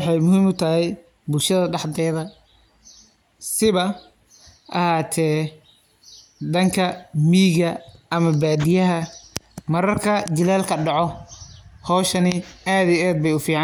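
Nothing in the recording stood out as a technical problem on listening.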